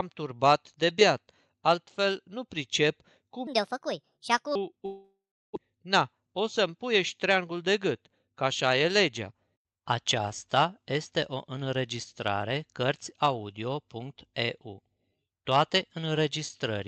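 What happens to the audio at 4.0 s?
That stretch, from 3.47 to 4.55 s, just after "beat altfel nu pricep", is a section at the wrong speed. It was likely played out against the wrong clock at 1.44 times the original rate, so the speech sounds hurried and jumps up by roughly seven semitones.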